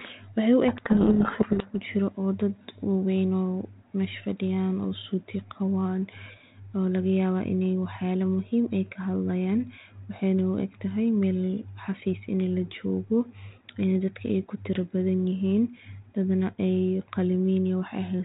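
A codec payload misread runs from 0.68 to 1.71 s: the decoder takes the G.726 code words with their bit order reversed, so each sample's predicted difference is wrong and the speech is buried under harsh, grinding distortion. The surrounding telephone-band sound, which fits 32 kbit/s G.726, carries light coding damage.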